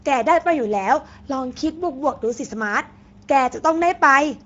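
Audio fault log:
Throughout: Speex codec artefacts are plainly audible in this speech. The hoarse, noisy texture and the synthetic-sounding top end fit roughly 17 kbps Speex, with nothing above 7.7 kHz.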